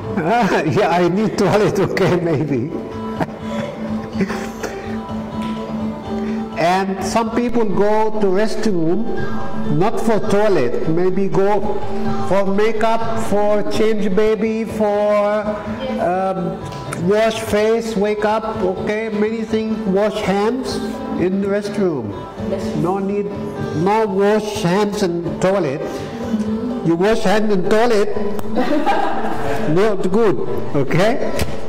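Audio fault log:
7.49–14.27 s and 27.13 s to the end, DC step: the waveform's zero line jumps by about −18 dBFS, like an offset input being switched in. You get a low thump at 7.49 s and another when it drops back at 14.27 s. The second step lands at 27.13 s with the same thump and just sits there until the clip ends. Since it's a flat shift rather than anything audible in itself, the sound carries on unchanged over the top.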